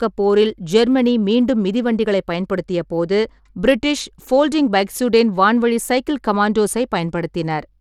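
From start to finish, the speech has likely passed through Bluetooth SBC compression, with the encoder working from a small bit pool that fits a rate near 96 kbps. Its coarse sub-band quantising leaves the upper bands starved of bits, so the treble thins and flickers in and out while a gritty, grainy layer with aliasing clings to the sound. The damage is plainly audible, and nothing reaches above 18.4 kHz.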